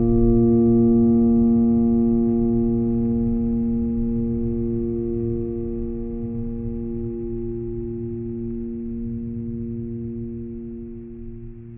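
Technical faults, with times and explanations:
No technical faults are present in this music clip.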